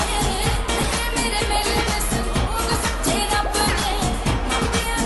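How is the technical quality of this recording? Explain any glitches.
No glitches turn up here; nothing in the recording trips, drops out or jumps, so there's nothing to explain.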